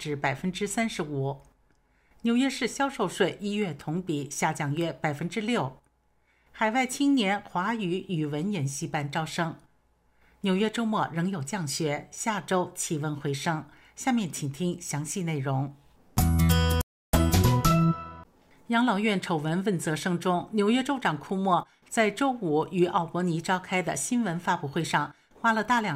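At 16.81 s the audio cuts out abruptly in mid-flow. Silence holds until 17.13 s, a gap of about 0.32 s. Then the sound picks up again. This is a playback stall. The dropout is sudden, with no fade in or out, and it is long enough to hear as a clear hole. The likely cause is that the player ran short of data, or its thread was blocked, so nothing reached the output until it recovered.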